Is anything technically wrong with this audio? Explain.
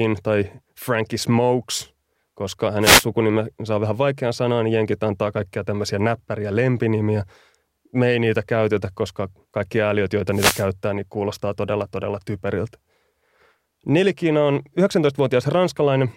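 Yes. A short swish of static cuts across the speech from 2.81 to 3.06 s and again from 10.32 to 10.66 s. These are wireless microphone noise hits: the analogue FM radio link briefly fades as reflected signals cancel, so receiver noise rises.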